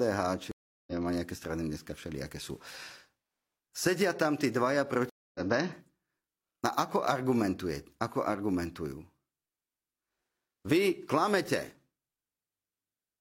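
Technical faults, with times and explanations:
0.51–0.93 s and 5.10–5.41 s, stream reconnect: the connection dropped and the audio stops dead for 0.36 s, then 0.25 s after "tam tí dvaja". A fresh decoder then picks up mid-stream roughly a third and a fifth of a second further on, skipping that speech.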